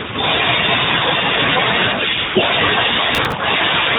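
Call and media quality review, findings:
AMR comfort noise, 2.18 to 2.36 s. The real background drops out for 180 ms and is replaced by a steady, smooth synthetic hiss. The handset's discontinuous transmission judged the sound silent and stopped sending speech frames, so the receiver generated noise from a coarse level and spectrum estimate. On a spectrogram, a flat, textureless band with hard vertical edges at both ends, capped at 4 kHz like the surrounding narrowband codec audio.

Processor overload crackle, 3.15 to 3.33 s. A short gritty tearing rides on the sound, then stops. The audio processor missed a run of deadlines, around five, with buffers of roughly 10 ms, and each miss replayed stale audio. On the waveform, repeated short segments with abrupt discontinuities at their joins. On the spectrogram, thin broadband vertical clicks.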